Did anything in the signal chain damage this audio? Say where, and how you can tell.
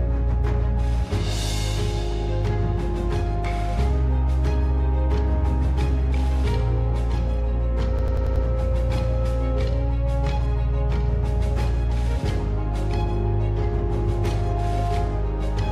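Yes. The damage is at the driver or buffer stage: a system hang loop from 7.99 to 8.45 s. A single 93 ms slice of audio repeats exactly five times, producing a machine-gun stutter at about 10.8 Hz. The host stalled while the audio hardware kept replaying the same ring buffer, whose length fits a 4096-sample buffer. When the system recovered, playback resumed without any audible gap.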